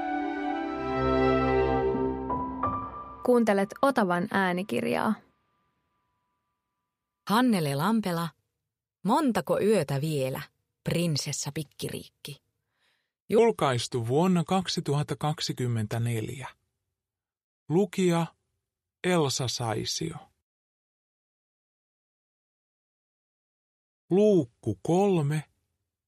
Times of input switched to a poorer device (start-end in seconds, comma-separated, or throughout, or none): none